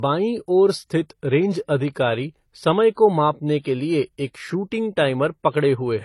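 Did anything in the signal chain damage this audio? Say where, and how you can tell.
Yes, at the codec stage. The speech carries two layers of compression smear throughout and has nothing above 12 kHz. That's likely transcoding between lossy codecs, and it sounds like AAC-LC re-encoded as HE-AAC.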